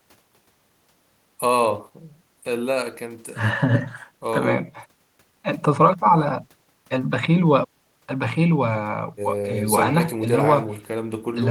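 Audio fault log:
No faults turn up anywhere in the speech. Nothing here calls for a log entry.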